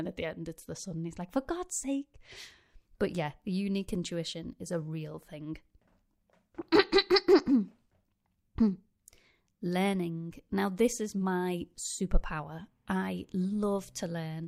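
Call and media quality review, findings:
No technical faults found in the speech signal; capture, transport and playback paths show no audible defects.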